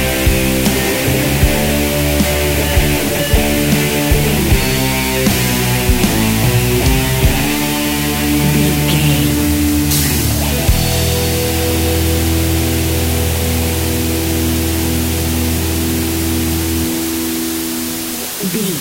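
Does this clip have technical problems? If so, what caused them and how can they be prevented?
Yes. A constant, even hiss sits under the sound from start to finish, loud enough to reach roughly 10 dB below the signal itself, yet with no crunch or distortion on top of it. That is low bit depth with dither: the audio was reduced to only 4 bits, and dither added before rounding turned the coarse quantisation error into steady white noise instead of harsh distortion. To prevent it, keep at least 16 bits through recording and export.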